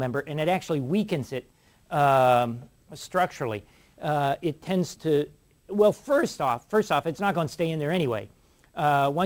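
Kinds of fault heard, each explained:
Sample clock jitter: converter clock wanders by around 7 microseconds rms, mistiming each sample, so error follows waveform slope; a hiss roughly 30 dB below the signal rises with loud, high sounds and vanishes in silence, showing as broadband noise filling only energetic spectrogram regions.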